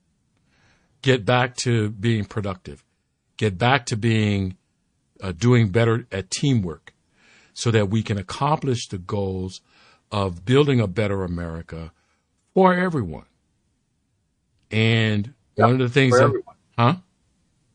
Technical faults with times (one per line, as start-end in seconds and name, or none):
0.00-17.75 MP3 compression
1.54-1.58 pre-echo
2.28-2.31 pre-echo
5.38-5.41 pre-echo